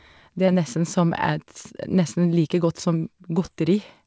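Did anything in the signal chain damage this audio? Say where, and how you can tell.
Yes, at the network stage: two short concealed packet losses, at 0.46 to 0.50 s and 3.46 to 3.50 s, the second right after "like godt som". Each is a brief smear where about 20 ms of audio never arrived in time. The receiver extended the preceding sound to fill the gap, then crossfaded back into the real signal. This leaves a small wobble in place of the original detail. The call path carries nothing above 8 kHz, consistent with G.722.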